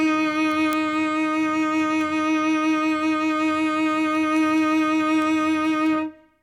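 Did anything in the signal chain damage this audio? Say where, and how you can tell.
Yes. Word clock ticks run through the music from 0.30 s to 6.29 s: about thirty sharp clicks of uneven strength, roughly every 0.2 s. The receiving device at the digital link isn't locked to the sender's clock, and the two differ by about 100 ppm. At each slip, one sample is dropped or repeated.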